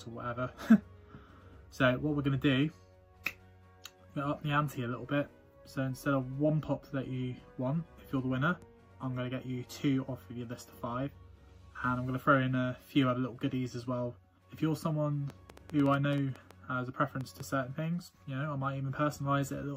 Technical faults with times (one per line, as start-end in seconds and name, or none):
15.30-17.41 train of clicks